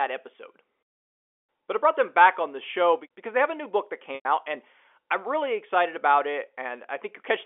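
Packet loss with pitch repetition at 4.15 to 4.25 s in this speech clip, between "new book that" and "out and I'm really": about 100 ms of audio went missing. The receiver filled the hole by repeating the last pitch period, which fades away before the speech cross-fades back in. The telephone band sits at 300 Hz to 3.4 kHz, consistent with G.711 coding.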